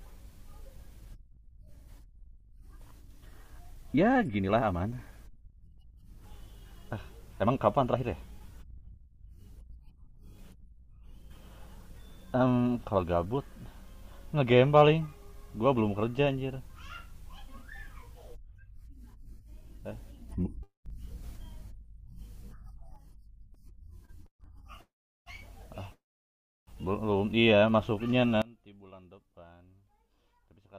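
At 20.29 s the speech and its background noise step up together by about 6 dB until 22.96 s. At 28.42 s both drop by about 22 dB to the end. Each sudden gain jump is likely a digital gain change applied without a ramp.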